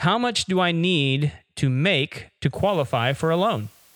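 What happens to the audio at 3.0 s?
At 3.0 s the audio is inside a stretch of low bit depth with dither that starts at 2.55 s, just after "need to make to", and runs to the end. The sound is quantised to very few levels, consistent with 8-bit resolution, and dither added before rounding turns the rounding error into steady white noise. It is heard as a constant, even hiss about 30 dB below the speech, with no audible distortion.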